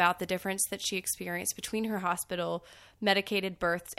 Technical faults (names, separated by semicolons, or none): pre-emphasis left on